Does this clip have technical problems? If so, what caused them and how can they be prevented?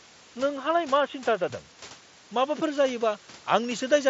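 Yes. For the first 1.5 s, from 0.0 to 1.5 s, the speech is dull and boxy, with a narrower band. It then opens up to the wider mSBC headset band, reaching roughly 7.7 kHz with a light grain. The switch has no gap and no real level jump, and the poorer input carries its own faint noise, about 40 dB down. That's most likely an input switched to a poorer device, starting on a narrower microphone or profile before moving to the better one. Room noise sits about 25 dB under the speech throughout. To prevent it, lock the input device and profile before recording starts so the system can't swap sources partway in.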